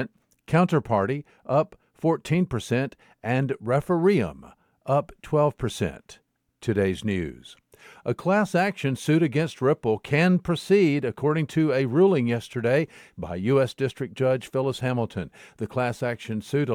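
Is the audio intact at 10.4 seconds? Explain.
Yes, at 10.4 s the speech plays through intact with no audible fault.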